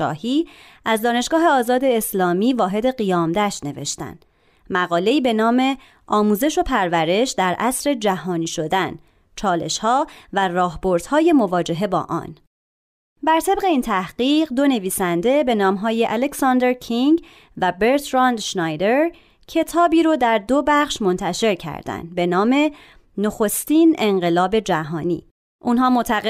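No technical faults are audible anywhere in this recording.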